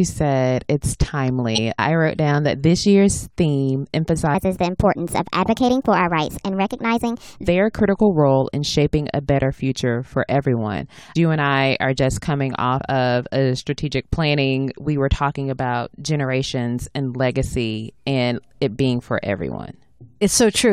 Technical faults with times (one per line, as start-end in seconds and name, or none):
1.54-1.59 compressed frames skipped
4.35-7.48 section at the wrong speed
12.78 compressed frames skipped